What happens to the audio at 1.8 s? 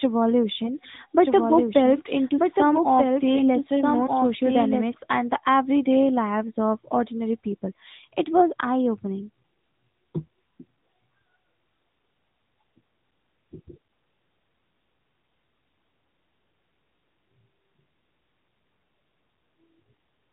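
At 1.8 s you're inside a doubled audio track, running from 1.24 to 4.94 s, just before "and the everyday lives". A second full-band copy trails about a second and a half behind, a few dB quieter, with no room tail, likely from an edit or capture path holding two out-of-step copies. It cuts in and out abruptly.

Underneath that, the whole clip carries the AMR narrowband mobile codec. Nothing above 4 kHz survives, and the vocal-tract model rebuilding each 20 ms frame leaves a plainly buzzy, synthetic edge, which fits a mid-rate mode around 10 kbps.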